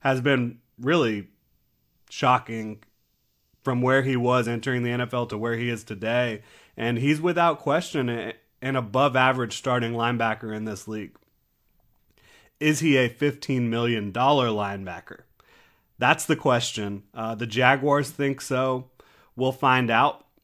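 Nothing is technically wrong with this recording of speech.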